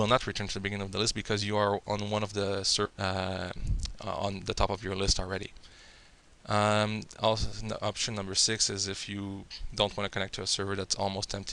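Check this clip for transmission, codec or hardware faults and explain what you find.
Two kinds of fault are present: a skip ahead and two stretches of jitter buffer speed-up.

At 2.85 s there is a skip ahead. About a second of audio was discarded while later audio was already queued. Nothing fills the gap. The sound jumps forward abruptly, with the two sides joined almost directly.

Jitter buffer speed-up follows from 2.90 to 4.78 s at 112% speed, and from 5.20 to 7.05 s at 110%. The buffer held too much audio. The receiver repeatedly cut tiny pitch-period slices, roughly a fifth of a second in each stretch. The sound hurries, but its pitch stays put.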